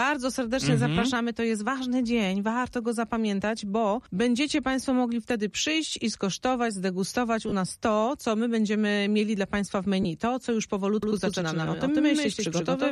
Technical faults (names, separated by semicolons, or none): lost LE Audio frames; doubled audio track